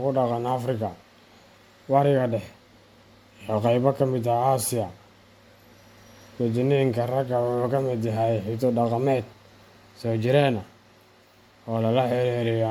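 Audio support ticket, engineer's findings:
Generation loss throughout the speech. Swirly, hollow smearing and blurred consonant attacks, with nothing above 19.7 kHz. Likely repeated MP3 decode/re-encode, several passes. Each pass re-quantises on a shifted frame grid, stacking noise and spectral holes. Fits a 96 kbit/s chain.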